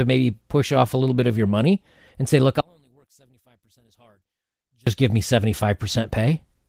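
From 2.61 to 4.87 s, between "money and say look" and "give me", the speech nearly vanishes, dropping about 37 dB to a faint residue. The likely cause is one channel inverted: the reversed polarity cancels the shared centre content in the mono sum.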